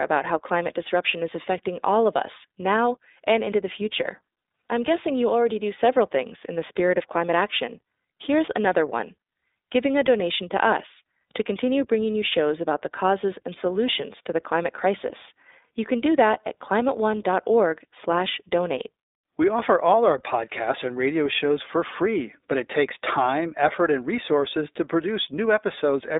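A speech clip carried throughout by the iLBC codec: nothing survives above about 3.8 kHz, the lows are thinned below 300 Hz, and the voice has a plainly audible rough, synthetic edge. On a spectrogram the energy stops at a flat ceiling, and the framing fits iLBC's 20 ms mode.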